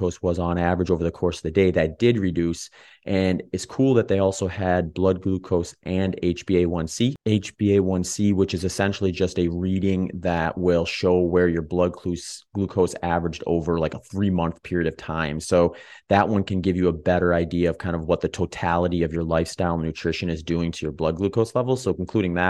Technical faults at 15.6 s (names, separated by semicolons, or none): channel delay (comb filtering)